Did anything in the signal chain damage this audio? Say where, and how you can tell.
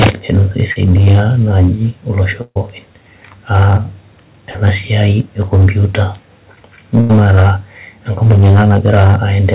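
Yes. Hard clipping affects the whole clip: every loud syllable carries a harsh fuzz, from a stage driven about 19 dB past full scale, so a few percent of samples are cut flat. Unlike G.711 coding noise, which stays under 4 kHz, the distortion tracks loudness and vanishes on quiet passages.

Short concealed packet loss occurs at the network and jitter buffer, at 0.72 s and 4.51 s, just before "siai e komputa". Each is a brief smear of roughly 40 ms where the decoder extended the previous sound and blended back. A converter click would be an instant tick, not a stretched sound.

Burst of packet loss also comes from the network, at 2.42–2.57 s and 7.01–7.11 s. Here 140 ms and 80 ms of audio never arrived. The held, fading continuation in the first case drops to about 60 ms of silence, and the audio resumes further on with material skipped, rather than pausing and catching up as a buffer underrun would.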